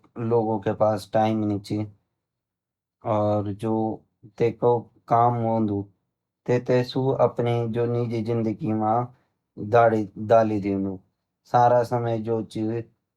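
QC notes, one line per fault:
No fault found in the speech, so there is no fault line to log.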